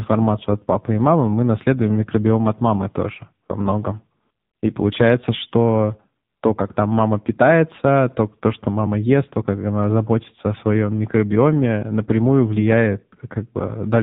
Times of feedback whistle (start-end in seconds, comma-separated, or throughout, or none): none